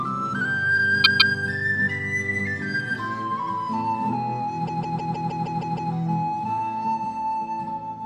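At 1.03 s, and again from 4.66 to 5.92 s, repeated frames make the sound stutter: a 157 ms block replays twice, then eight times. The block fits six compressed frames. Unlike a dropout, nothing is lost; the clip grows longer.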